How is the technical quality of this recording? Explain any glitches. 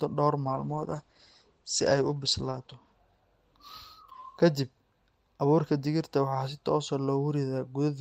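The recording has one clear fault, a call bitrate drop from 0.45 to 2.91 s. The call's bandwidth estimate fell, so the encoder was given far fewer bits. The sound fits a drop from about 32 kbps to about 11 kbps, held at its lowest for roughly 2.3 s. With so few bits the codec quantises the speech coarsely and cuts everything above 8 kHz, down from the usual 20 kHz. The speech turns rough, watery and muffled until the bitrate recovers.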